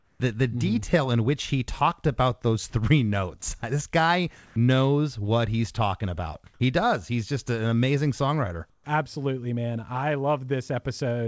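From 0 to 0.2 s, before "the the", comfort noise in place of the background gives a flat hiss about 2 dB quieter. Discontinuous transmission likely caused it. At 2.70 to 2.72 s, after "he talked about those", sound dropped by the voice detector loses 10 ms to steady noise, likely from a misjudged pause. Comfort noise returns at 4.46 to 4.56 s at equal level. At 8.70 to 8.86 s, after "just an amazing songwriter", it is about 12 dB quieter.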